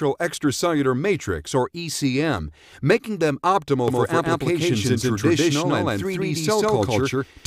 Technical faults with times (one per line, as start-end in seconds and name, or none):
3.88-7.47 doubled audio track